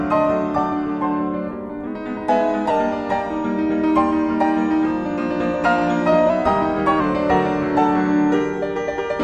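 A clock-matching stage likely stepped the playback rate up to correct drift, a drift correction step, from 1.87 to 2.70 s and again from 6.30 to 7.00 s. The audio runs about 6.2% fast and rises roughly a semitone (104 cents), then snaps back.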